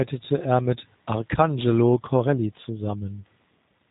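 Speech throughout carries plainly audible G.729 codec damage. Nothing passes above 3.8 kHz, and the sound is slightly rough and synthetic because it is rebuilt from a vocal tract filter, pitch predictor and sparse pulses per frame, which fits an 8 kbit/s VoIP link.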